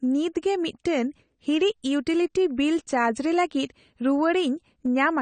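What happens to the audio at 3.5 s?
Heavy AAC compression, likely AAC-LC at a low bitrate around 32 kbps, runs through the whole clip, including 3.5 s. Its hearing-model quantisation removes everything above 9 kHz and starves fine detail, leaving the speech dull and smeared, with audible warbling and fizz.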